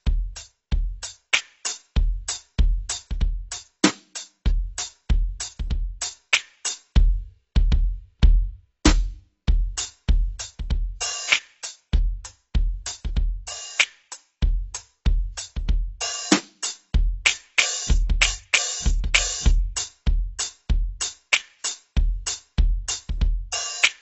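From start to finish the music sounds dull and smeared, with nothing above 8 kHz, so bright edges lose their air and sustained tones pick up a warbling, fizzy shimmer. The likely cause is AAC compression: the AAC-LC coder, starved of bits at what sounds like roughly 24 kbps, cut off the top band and quantised the remaining frequency lines so coarsely that parts of the spectrum dropped out or blurred.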